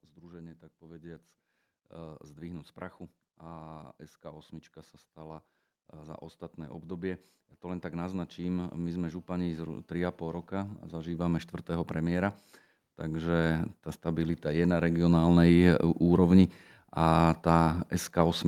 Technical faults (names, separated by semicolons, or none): automatic gain rising